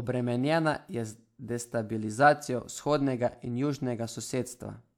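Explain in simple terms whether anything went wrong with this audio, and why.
Nothing went wrong with this speech recording. No moment in it has a technical problem to point to.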